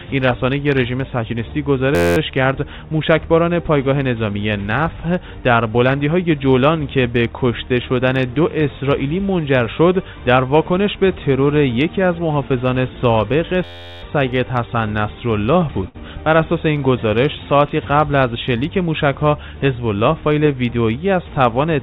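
A steady buzz at about 86 Hz replaces the audio from 1.95 to 2.17 s and again from 13.64 to 14.03 s. This is a system hang loop: while the system froze, the hardware kept replaying one 11.61 ms slice of its ring buffer, which fits a 512-sample buffer. Afterward the audio picks up with next to nothing skipped. At 15.88 s the sound smears into a held, fading tail for 59 ms and then jumps ahead past 60 ms of missing audio. That is a burst of packet loss, where the receiver stretched the last sound to cover late or lost packets. The whole clip passed through a G.711 mu-law call path, so it carries nothing above 4 kHz.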